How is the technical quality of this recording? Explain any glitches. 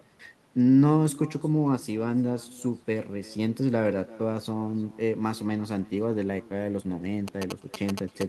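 The technical quality is compromised by two faults: a constant echo, and radio interference at the very end.

Throughout the clip there is echo with no canceller. A loudspeaker at the far end feeds the microphone, and nothing subtracts it, so every phrase returns about 23 dB down, roughly a third of a second later, and thin.

From 7.28 s to 8.28 s there are GSM signalling bursts. A nearby 2G phone is exchanging brief signalling transmissions, and the audio circuitry rectifies them into galloping ticks and 217 Hz buzzing, around 10 dB below the speech.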